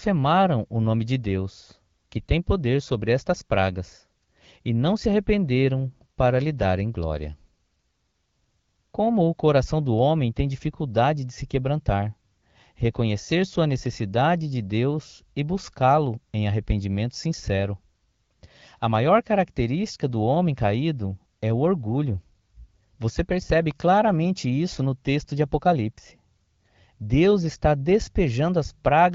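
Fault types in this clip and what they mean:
Electrical switching spike: a brief sharp spike at 23.71 s riding on top of the speech, most likely a nearby switch or static discharge arcing into the line.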